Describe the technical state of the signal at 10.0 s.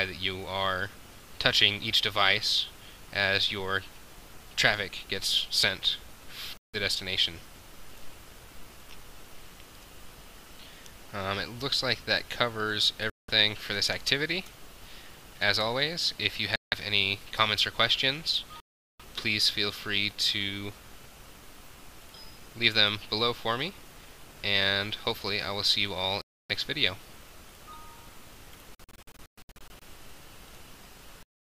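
At 10.0 s the signal is intact, with no fault of any kind to be heard.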